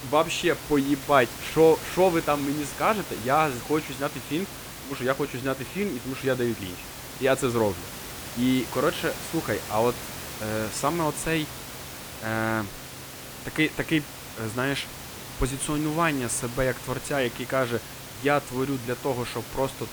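Nothing stood out on listening to this speech, apart from the room's own background noise sitting about 13 dB below it.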